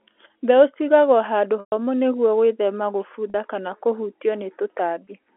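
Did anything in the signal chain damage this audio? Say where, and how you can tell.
Yes, in the network. A buzzy held tone fills 1.60–1.72 s before "nĩguo gwĩthema" and fades out, with shorter ones at 3.30–3.34 s before "kana kũhutio" and at 5.05 s. This is packet loss with pitch repetition: the receiver loops the last pitch period.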